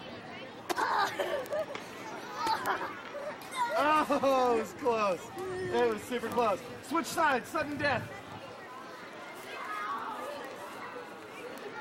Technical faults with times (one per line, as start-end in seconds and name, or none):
0.13-11.78 word clock ticks